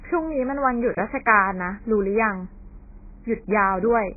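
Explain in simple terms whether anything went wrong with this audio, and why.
Yes, something's off for the whole clip: the speech sounds muffled and thin, like it's coming through a cheap phone line. Nothing above about 2.5 kHz survives, so the crisp edges of the speech are gone, and what's left has a smeared, watery texture. That points to heavy AAC compression, most likely squeezed very hard to save space, so the encoder threw away the upper range and coarsely approximated the rest.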